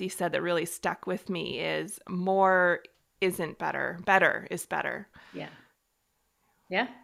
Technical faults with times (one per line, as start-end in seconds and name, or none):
none